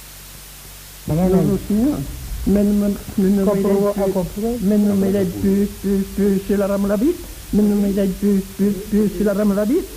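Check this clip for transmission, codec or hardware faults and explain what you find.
There's one fault, and it runs the whole way through: low bit depth with dither. The audio sounds like it's been reduced to about 6 bits, with dither added before rounding. At that resolution the rounding error is big, and the dither turns it into steady white noise instead of grainy distortion. You hear a constant, even hiss sitting only around 20 dB below the signal, with no crunch or harshness on top.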